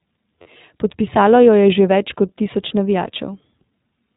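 iLBC codec, across the whole clip: the speech has the plainly audible roughness of this narrowband VoIP coder, with nothing above 4 kHz, so sibilants sound dull and the voice has a slightly synthetic edge. iLBC codes each frame's excitation independently rather than predicting from the previous one. The coarse texture suggests a bitrate around 15.2 kbps with 20 ms frames, and it is present throughout.

Lost iLBC frames, from 0.42 to 0.47 s: for about 40 ms the speech turns into a brief held, faintly buzzy vowel. The decoder had no data for that stretch and filled it by repeating the last pitch cycle mixed with noise. The gap's length fits two missing 20 ms frames. Because each iLBC frame decodes on its own, normal speech returns as soon as the next frame arrives.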